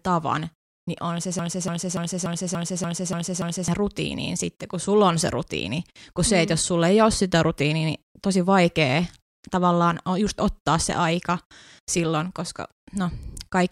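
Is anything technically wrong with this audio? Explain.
Yes. From 1.39 to 3.68 s, after "tavan niin on se", a broken-record loop repeats one 290 ms fragment eight times. This likely comes from a stalled player or stream resending its last buffer. The speech that belonged there is lost before "rutiiniin sitten kun sulla" resumes.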